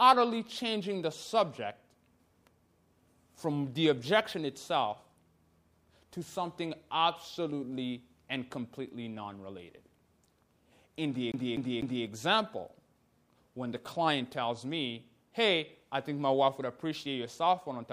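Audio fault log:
11.32–12.06 s, CD stuck on one turn: a fast, even stutter as the same short slice of about 0.25 s (247.62 ms) plays three times, with a brief mute at each jump. A scratch is throwing the laser back one track at the same point on every rotation.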